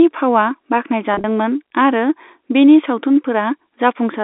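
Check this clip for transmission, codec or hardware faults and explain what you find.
One transmission fault is audible, over a telephone-band line (roughly 250 Hz to 3.7 kHz, consistent with G.711 mu-law). From 1.14 to 1.24 s there is packet loss with pitch repetition. About 70 ms went missing in runs no longer than 30 ms, which fits several short lost packets. The receiver repeated the last pitch period to fill each hole. Because the gaps are short, it sounds like a brief buzzy, held flutter rather than silent dropouts or clicks.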